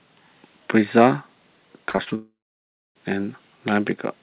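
Repeated packet loss (robotic sound) runs from 1.9 to 2.13 s. Four short gaps, the longest about 41 ms, are each patched by extending the preceding speech, so roughly two fifths of the span is concealed and comes out choppy.

A long network dropout, the likely cause, follows from 2.15 to 2.97 s. About 0.8 s of speech never arrives. The concealment briefly carries the last sound as a fading buzz before about 0.63 s of silence, and the audio resumes with that portion missing. Over the call path, where nothing reaches above 4 kHz as fits G.711 mu-law at 64 kbps, the speech sounds narrowband and dull.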